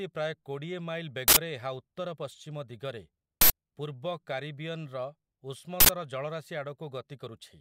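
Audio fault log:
1.28–1.37 s, 3.41–3.50 s and 5.80–5.89 s, uninitialised buffer: three bursts of digital noise, each about 85 ms long, which fits a 4096-sample block played before any speech was written into it, so stale memory came out as samples. Unlike a dropout, which leaves silence, these gaps are filled with harsh noise. Unlike a single click, each burst lasts a full block and switches on and off abruptly.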